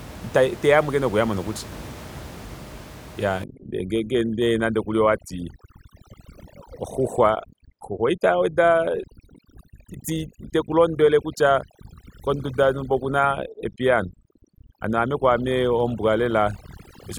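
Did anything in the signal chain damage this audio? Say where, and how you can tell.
Yes. From about 3.44 s right to the end there's overdone noise removal, which sits in the call-processing stage. The room noise, about 17 dB under the speech, drops to near silence with little twinkling specks. That's a suppressor set too aggressive: any frequency band close to its noise estimate gets pushed way down or shut off, so the quieter parts of the voice get taken out along with the background noise.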